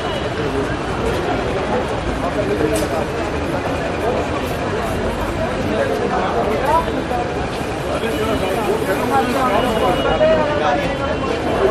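From the start the audio sounds watery and swirly, with smeared attacks and metallic chirps on bright sounds, the marks of MP3 compression, likely at a low bitrate fitting about 64 kbps. A spectrogram shows sparse high bands flickering on and off.

At 7.80 s a corrupt frame decoded is heard as a short chirp or blip. Damaged bits in a couple of frames sent energy to the wrong frequencies, peaking at about -15 dBFS. It appears as a brief vertical smear on the spectrogram and a spike in the waveform.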